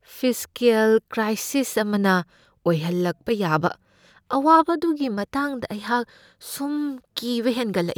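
Listening to this speech recording, nothing stood out as a technical problem.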